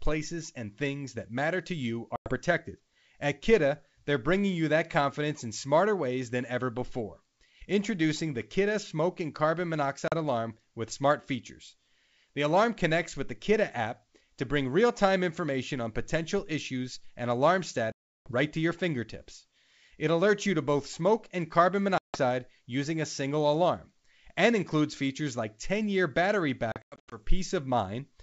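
Packet loss on an ADPCM call cuts this speech at 2.16–2.34 s, just after "that matter to you" (100 ms missing), at 10.08–10.16 s (40 ms), at 17.92–18.32 s, between "potential issues and alarm" and "right to your fingertips" (340 ms, roughly fifteen packets), at 21.98–22.20 s (160 ms), and at 26.72–27.20 s after "year battery", where 260 ms drops out in patches no longer than 100 ms. Each gap is a hard-edged silence. Afterwards the decoder's predictor and step size no longer match the sender's, so the sound resumes at the wrong level or with a click and brief distortion, then settles within tens of milliseconds.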